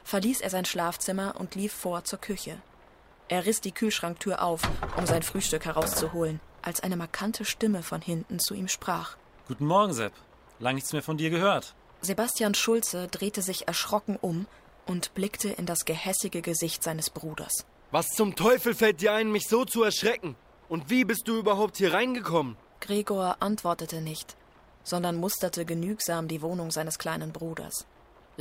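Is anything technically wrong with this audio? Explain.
Yes. From the start to 18.55 s there is sample clock jitter: the converter's clock wanders by around a microsecond, so each sample is taken at a slightly wrong moment. The resulting error, roughly 35 dB below the signal, is heard as a hiss or grit riding on loud, bright passages and disappearing in quiet ones.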